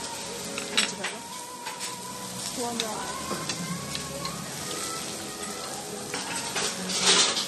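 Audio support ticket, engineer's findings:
Throughout: no treble above 12.1 kHz, watery swirl, metallic chirps on bright transients, smeared attacks. Likely MP3 compression, fitting a bitrate near 40 kbps. Encoder zeroes weak spectral lines frame to frame. A plain low-pass wouldn't warble like this.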